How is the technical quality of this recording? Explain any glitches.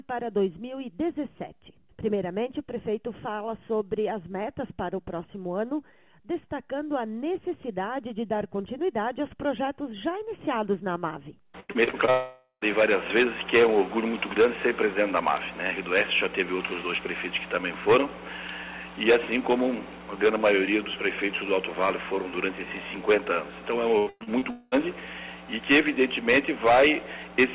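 The recording has two bursts of damage, each a stretch of choppy sound followed by a gap. The audio is narrowband throughout, with nothing above 4 kHz, which fits a G.711 mu-law call path at 64 kbps.

Repeated packet loss (robotic sound), 11.6 to 12.10 s and 23.98 to 24.44 s: audio packets kept failing to arrive, and each hole was patched by stretching the previous fragment. About 40 to 55% of each span is patched, with holes up to about 110 ms. The sound turns choppy. A spectrogram shows short repeated smeared blocks.

Long network dropout, 12.10 to 12.64 s and 24.50 to 24.75 s: the last sound continues as a fading buzz, about half a second at 12.1 s and about 0.2 s at 24.5 s, and the first gap ends in roughly 80 ms of silence. This is likely a network outage. On a waveform, the first gap's signal decays into flatness before the audio returns.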